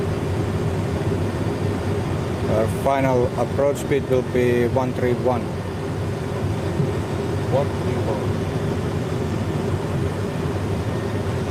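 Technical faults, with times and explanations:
Nothing technical went wrong here; every part of the audio comes across steady and intact, with no problems to flag.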